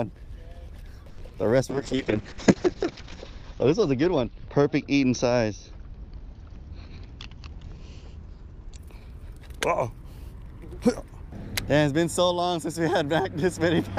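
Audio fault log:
1.09 to 1.20 s, short stall from a late packet: the buffer ran dry, so the last sound was held about 90 ms, then resumed with nothing lost.
1.28 to 1.31 s, short concealed packet loss: about 40 ms never arrived, and the receiver briefly extended the previous sound before blending back, leaving a small smear.
1.71 to 8.84 s, call bitrate drop: the encoder fell from 48 to 6 kbps, cutting bandwidth from 20 kHz to 8 kHz, so the audio turns coarse and muffled, lowest for about 1.2 s.
6.85 to 7.85 s, jitter buffer speed-up: excess buffered audio was trimmed in many short pitch-period cuts, roughly 70 ms in total, so playback runs 7% faster at the same pitch.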